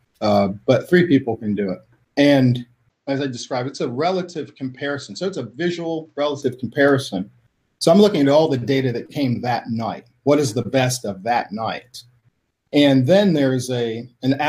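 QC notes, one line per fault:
2.90–6.42 s, input switched to a poorer device: the sound abruptly turns duller and slightly quieter, dropping by roughly 5 dB, with a faint new background hiss sitting well below the signal. It clears again just as suddenly, with no gap at either change. Nothing above 8.1 kHz comes through in this stretch, which likely means the recording briefly ran through a different, band-limited input such as a headset or secondary microphone before returning to the original.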